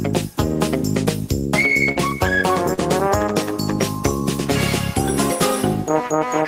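At 1.91 to 1.97 s and again at 2.73 to 2.79 s there is short concealed packet loss: about 40 ms of audio each time failed to arrive, and the receiver synthesised a stand-in by extending what came just before, then cross-faded back. Each gap is heard as a brief smear or wobble in the sound. On a spectrogram the patch shows smoothed, repeated-looking harmonics or flat noise instead of natural detail; the waveform shows a slightly too-regular stretch.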